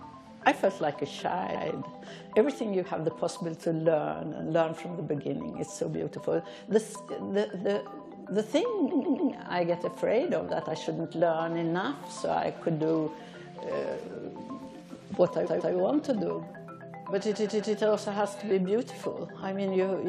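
Repeated frames: short runs of compressed frames arrived more than once, so the decoder replays them. At 1.54 s a 116 ms block plays twice; at 8.91, 15.45 and 17.31 s a 139 ms block returns three, two and three extra times, stuttering.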